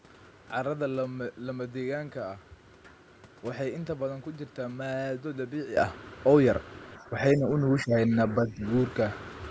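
A sudden gain jump hits this speech at 5.77 s and holds to the end: voice and background noise step up together by about 12 dB with no ramp, likely a gain setting applied instantly. Speech suppressed in double talk appears at 6.98 to 7.14 s, 7.35 to 8.13 s and 8.34 to 8.64 s. There the voice dips by roughly 5 to 10 dB, which points to an echo canceller pulling down the near talker while the far side speaks. The call microphone processing trims the deepest bass, and nothing reaches above 8 kHz.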